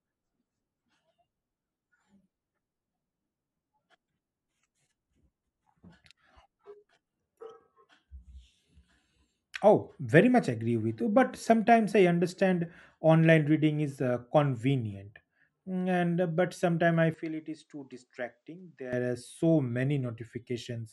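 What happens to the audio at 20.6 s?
Nothing goes wrong at 20.6 s: the speech carries on intact there, with no dropout, click or distortion.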